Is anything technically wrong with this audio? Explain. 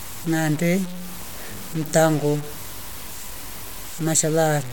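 Yes. Throughout the clip, the speech sounds grainy and gritty, with quieter stretches dropping to silence or sputtering. This is likely low bit depth without dither, with roughly 5-bit truncation leaving error only about 15 dB below the signal.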